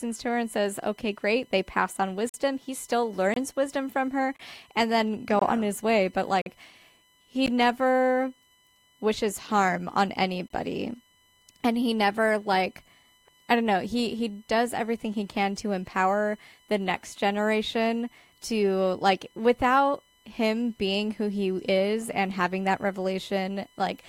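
From the start, a USB whine sits about 35 dB below the speech. It is a fixed 1 kHz tone, strongest at 3 kHz, and too high in pitch to be mains hum. Gaps between stream segments insert hard-edged silences of 14 to 47 ms on a one-second grid at 2.29 s (after "great they pass on"), 3.34, 4.36, 5.39, 6.42, 7.46 and 10.48 s. The speech simply resumes, with nothing skipped, unlike a dropout.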